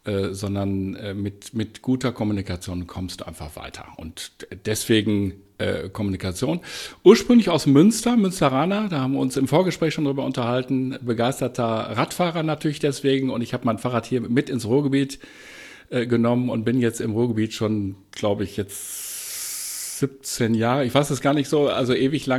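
Nothing goes wrong anywhere in this recording, so there's simply no fault to point to at any moment.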